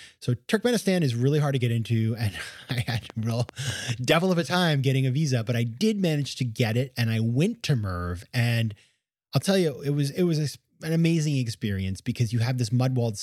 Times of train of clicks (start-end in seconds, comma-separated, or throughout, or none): 2.70-3.90